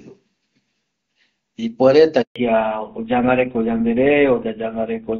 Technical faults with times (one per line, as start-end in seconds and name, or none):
2.22-2.36 handover gap
2.36-5.19 fallback to narrowband